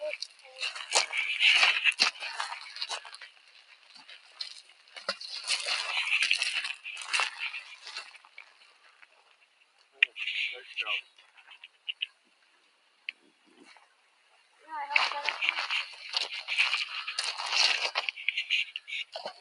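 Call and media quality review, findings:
Noise suppressor applied to music or sounds, whole clip: speech-tuned suppressor treating steady tones, ambience and tails as noise. Gain swings about 20 dB, attacks pass while sustains sink, giving pumping, fluttering, thinned sound.

Sound cut by the noise suppressor, 0.25–0.6 s, 3.01–5.04 s, 7.61–9.99 s, 11.03–13.62 s, 13.78–14.63 s: held or decaying material pulled down about 10–11 dB, tails truncated. Suppressor misclassifying sustained sound as noise, cutting harder than elsewhere.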